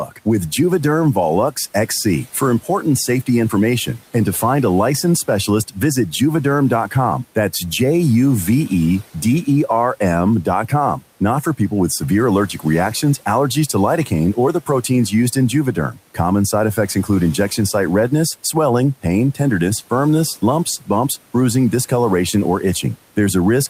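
Speech cut by the noise suppressor, from 0.05 to 6.95 s, 10.43 to 19.4 s and 21.89 s to the end: the suppressor mistook quiet speech for room noise and pulled it down by up to about 12 dB (about 8 dB in the last span). Around half a second and then about a second of sound comes out swallowed or faint.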